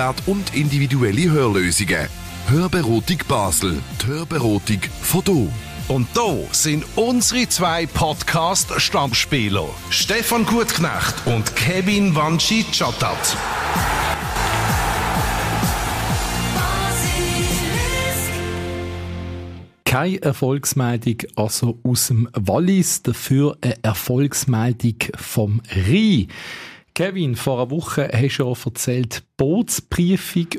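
One channel drops out twice, from 4.01 to 4.35 s and again from 14.14 to 14.36 s. Each time the sound falls abruptly by about 6 dB for roughly a third of a second, then a fifth of a second, and snaps back. The likely cause is one stereo channel going silent briefly. Once the pair is summed to mono, material common to both sides halves in level, and anything carried only on the lost side vanishes.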